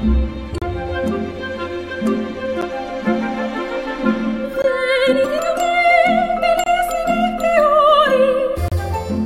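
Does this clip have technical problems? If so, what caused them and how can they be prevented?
Yes, there are gaps between stream segments: hard-edged silent holes at 0.58–0.62, 2.61, 4.62–4.64, 6.64–6.66 and 8.68–8.72 s. They recur every 2 s, where the segment timestamps don't quite meet. Make sure each segment's timestamps line up exactly with the end of the previous one when packaging the stream.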